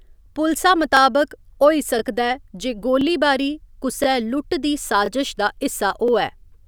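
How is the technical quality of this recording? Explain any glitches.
The speech recording has one recurring glitch: overlapping chunks, at 0.97, 1.99, 3.01, 4.04 (just before "लुट्ट दी"), 5.06 (just after "लुट्ट दी") and 6.08 s. The audio was assembled from 1.0 s chunks, each starting about 23 ms early, so a brief slice replays as a small stutter. The strict one-second rhythm and duplicated sound, not a gap, distinguish it from dropouts.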